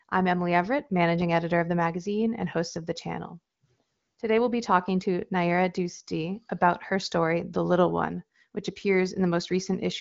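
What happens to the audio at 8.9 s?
Nothing goes wrong at 8.9 s: the speech carries on intact through the AMR wideband (HD Voice) codec, with its usual top end stopping short of about 7.5 kHz.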